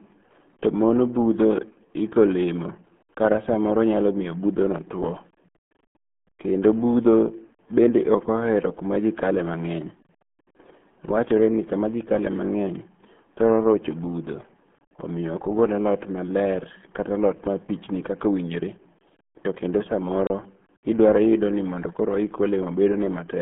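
RealAudio 14.4 codec damage runs through the whole clip, from start to finish. The speech has been squeezed through a very low-rate speech coder, and the heavy artefacts fit an 8 kbit/s stream. Only a narrow band between about 150 Hz and 3.4 kHz carries the voice, with nothing audible above 3.7 kHz. The result is muffled and gargly, with a watery, smeared texture on every syllable.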